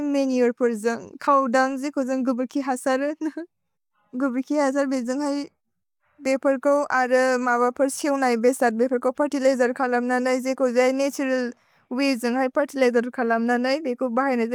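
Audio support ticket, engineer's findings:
No faults found on listening; speech path checks out with nothing to report.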